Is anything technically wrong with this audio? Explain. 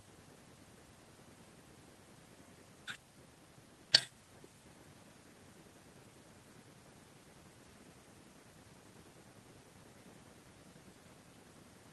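No, nothing is technically wrong with this audio.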